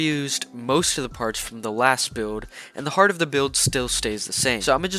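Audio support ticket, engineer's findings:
No audible faults found on review; no action needed.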